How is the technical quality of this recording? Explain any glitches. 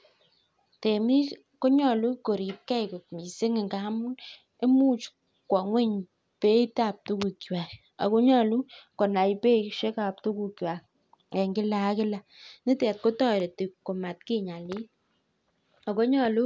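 No glitches turned up on a full listen; the speech recording shows no audible technical faults.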